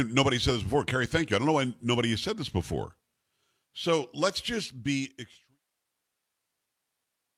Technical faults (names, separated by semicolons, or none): none